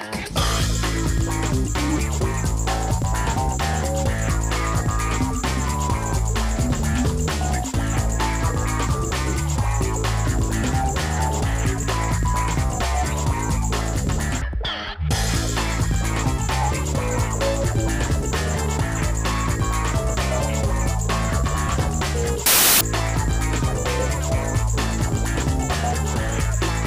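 At 22.46 s a burst of loud, harsh broadband noise replaces the sound and runs to 22.81 s, about 0.35 s in all. This is samples built from the wrong bytes: for that stretch each sample value was assembled with its bytes misaligned or in the wrong order, so the rapidly changing low-order bits landed in the most significant position. The result is a harsh noise that masks the underlying audio until correct framing resumes.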